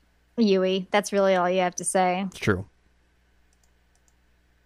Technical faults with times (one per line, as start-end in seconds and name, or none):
none